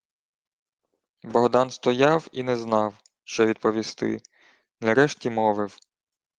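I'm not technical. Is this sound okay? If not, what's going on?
No, not quite. There are two brief rough spots in the speech, from 2.55 to 2.61 s and from 3.87 to 3.89 s. Each is a lost packet rebuilt from error correction. A bit of audio went missing in transit, but the next chunk carried a lower-quality backup copy, so the player used that instead of leaving silence. The first spot covers two lost chunks patched together. Those moments come out grainier and noisier.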